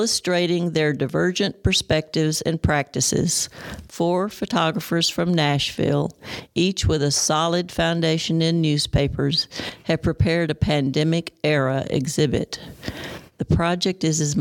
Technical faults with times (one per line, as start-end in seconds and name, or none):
none